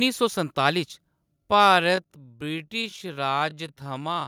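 From 1.28 s to the end, the speech suddenly slows to about 0.63 times its pace while the pitch holds steady. That's a time-stretched section, likely software stretching the audio to fill a length by repeating short pieces, which makes it drag.

Between 1.60 and 1.75 s the loudest syllables pick up a harsh, crackly edge. That's microphone overload: the input was likely set too hot, so peaks pushed about 1 dB past the converter's limit and a small fraction of samples got their tops sheared off.

Right after that, at 2.04 s, the voice and background both drop by about 5 dB in one step. That's the microphone volume stepped down, likely the call software reacting to the clipped peak by cutting the device's input gain all at once.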